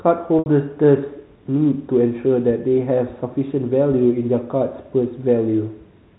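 Packet loss with pitch repetition hits this speech clip from 0.39 to 0.46 s, where about 70 ms of audio never arrived, which fits roughly seven 10 ms packets going missing. The receiver filled the hole by looping the last pitch period it had, so the sound briefly holds on a slightly buzzy, frozen tone that fades away before normal speech resumes through a short cross-fade. The telephone-band G.711 coding underneath stays clean, with nothing above 4 kHz.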